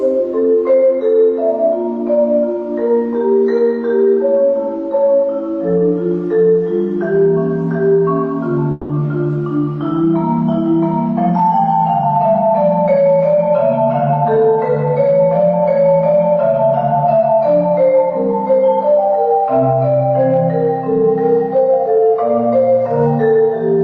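From 8.71 to 8.92 s the audio stops arriving, and the last sound is stretched into a buzzy, fading tail for about 180 ms rather than cutting to silence. When it resumes, roughly 180 ms of material is simply gone, so the sound jumps forward. This is likely a long network dropout. Unlike a brief packet-loss glitch, the concealment runs long enough to be heard as a smear, and unlike a plain gap, no true silence is reached.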